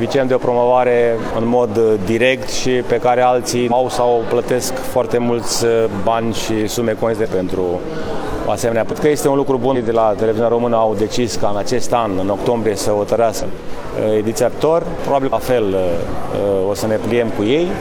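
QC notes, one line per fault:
3.67, 7.20, 8.87, 9.71, 13.38, 14.49 and 15.28 s: compressed frames skipped. At each point the audio jumps ahead, dropping roughly a fifth of a second up to about a second, in steps that fit a frame length near 46 ms. Each join is a brief glitch of about 50 to 60 ms.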